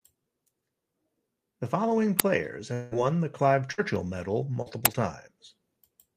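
At 2.19 s a 10 ms loud crack cuts in. This is an uninitialised buffer: a block played before any audio was written into it, so leftover memory came out as samples. The same crack returns at 4.85 s.

From 2.73 to 2.97 s the sound stretches into a fading buzz or hiss for about 0.18 s, then resumes with roughly that much missing. A long network dropout is the likely cause, with the receiver continuing the last sound across the gap.

At 3.72 to 3.80 s a fading continuation of the last sound replaces about 60 ms of speech. This is a burst of packet loss: several packets never arrived, and the receiver extended the previous sound while lowering it.

Around 4.62 to 4.68 s there is a brief smear where 40 ms went missing. This is short concealed packet loss, patched by continuing the last sound and blending back into the real signal.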